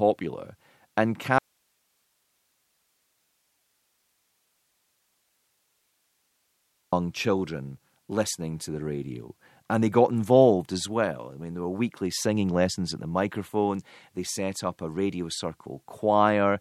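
Audio dropout to a faint residue, 1.38 to 6.93 s: the speech cuts off abruptly, leaving about 5.5 s of hiss some 45 dB down, then snaps back on "children listening to the". The source feed was likely interrupted while the downstream path stayed live.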